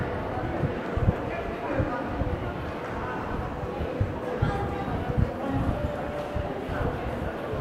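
No technical faults are audible.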